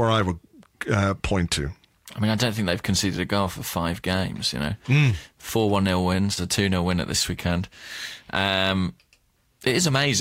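The speech recording carries no audible technical faults anywhere in its duration, with the signal holding steady throughout.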